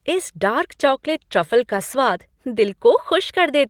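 From 0.72 to 2.31 s, just after "इस डार्क", the speech turns rough and muffled: a call bitrate drop forcing coarser encoding, consistent with a fall from about 32 to 16 kbps.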